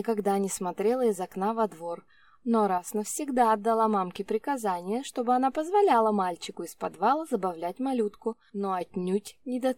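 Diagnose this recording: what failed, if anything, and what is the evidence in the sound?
Level dips abruptly, about 6 dB, at 2.78–2.88 s and 8.33–8.81 s; likely one channel drops out, halving the mono sum.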